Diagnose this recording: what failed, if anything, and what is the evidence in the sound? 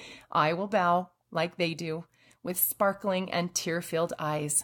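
Nothing failed at any stage of the chain: the speech runs without an audible defect anywhere in the recording.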